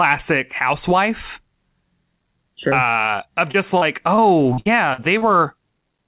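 At 2.70 to 2.73 s there's a short concealed packet loss. About 20 ms of the call didn't reach the decoder in time, so the receiver patched the hole by carrying the previous sound forward for roughly 13 ms and then blending back into the real signal. You hear it as a quick smear or wobble rather than a dropout.

From 3.51 to 5.23 s it gets rougher, with repeated packet loss giving that robotic sound. There are seven separate gaps, about 260 ms missing in total, and the longest runs to about 60 ms. Each one gets filled by extending the last sound, and the next hole arrives before things settle, so roughly 15% of that stretch is concealment. The result is choppy, with chunks missing. All of this rides on a narrowband call path with nothing above 4 kHz, which fits G.711 mu-law at 64 kbps.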